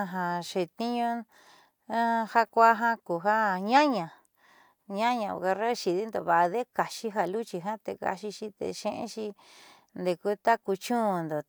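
No technical faults can be heard anywhere in the speech recording, and the signal holds steady throughout without any audible disturbance.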